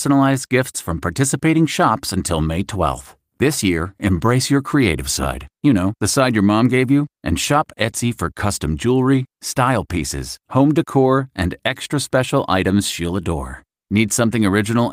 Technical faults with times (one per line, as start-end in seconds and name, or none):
none